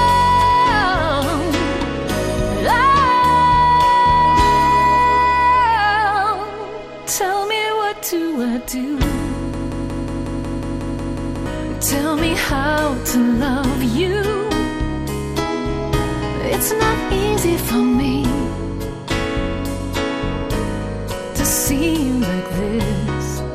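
Right from the start the whole thing has that dull, gurgly texture you get from MP2 compression. The top end is thin and keeps flickering in and out, and what's left has a grainy, coarse edge. That's what happens when MPEG Layer II runs short of bits, drops its upper sub-bands and quantises the rest roughly. The damage is plainly audible, which fits a low rate of around 80 kbps, like a weak digital radio service.

At 8.39 s, running to 8.73 s, there's a quick patch of DAB burbling. Bit errors have slipped past the error correction into the audio data, so wrong samples put short blips of noise into single sub-bands. You get a short burst of burbling sitting on top of the programme.

Then from 9.54 s to 11.46 s it turns into a broken-record loop. The same 182 ms fragment plays back to back, about eleven times, with no variation. That's likely the player or stream stalling and re-sending the last chunk it held. 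Whatever should have played in those two seconds is simply gone, replaced by the stutter.

Near the end, from 22.54 s to 22.90 s, the DAB burbling comes back in a short burst. It's the same kind of disturbance from bit errors getting into the sub-band data, and it's about as long and as heavy as the first one.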